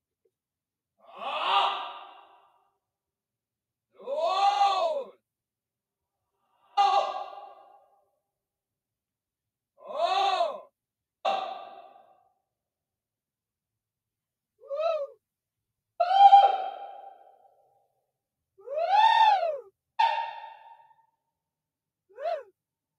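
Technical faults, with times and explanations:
No technical faults are audible.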